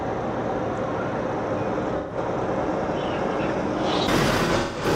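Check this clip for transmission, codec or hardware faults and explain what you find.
There are two patches of AAC frame loss with concealment. The first runs from 1.97 to 2.17 s. The second runs from 4.44 to 4.86 s. In both, the decoder lost frames and rebuilt the gap from the last good spectrum. The first gap is 128 ms, which fits about three lost frames, and sounds smeared and noisy. The second loses 213 ms spread over 341 ms, with a longest run of about 150 ms. It sounds broken-up and phasey.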